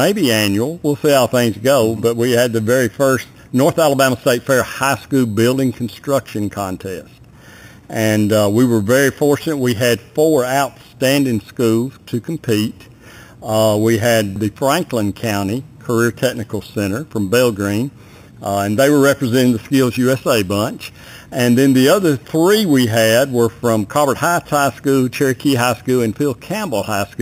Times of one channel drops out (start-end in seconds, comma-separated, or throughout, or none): none